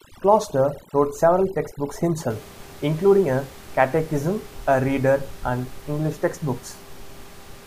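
From the start of the speech to about 2.30 s, just before "including a catechism a", the background falls to near silence dotted with twinkling specks. This is overdone noise removal: a noise reducer set too aggressively pushed individual frequency bands down or out whenever they sat close to its noise estimate, carving away quiet parts of the voice along with the room noise, which elsewhere sits about 22 dB below the speech.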